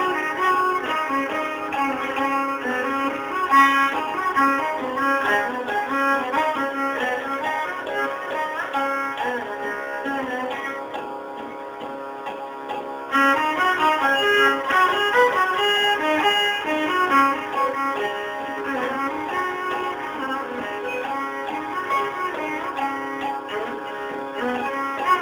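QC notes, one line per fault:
Throughout: crude rate conversion. The sound seems to have been moved from 44.1 kHz to 48 kHz by just repeating the nearest sample, no filtering, so a patterned error roughly 25 dB down adds a gritty, inharmonic fizz that rides on loud and bright passages.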